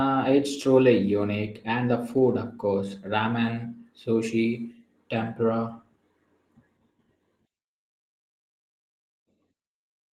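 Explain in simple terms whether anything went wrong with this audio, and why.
Nothing went wrong with this audio, so there is no fault to explain.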